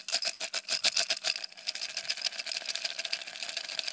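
From 0.34 to 0.41 s, the sound turns into a brief fading hiss, then jumps ahead. This burst of packet loss left a gap the receiver padded for about 55 ms by stretching the last sound, with roughly 60 ms of audio skipped. The call codec's cut-off above 8 kHz, which fits G.722, dulls the top throughout.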